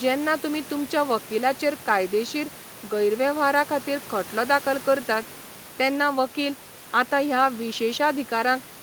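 The speech carries no audible technical faults.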